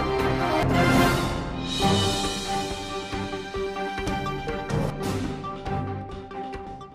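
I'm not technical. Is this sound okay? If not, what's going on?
No. The sound jumps ahead four times, at 0.63, 4.07, 4.90 and 6.67 seconds. This is compressed frames skipped. Small chunks of the stored audio were lost or rejected, so about 0.4 to 0.5 seconds vanishes each time.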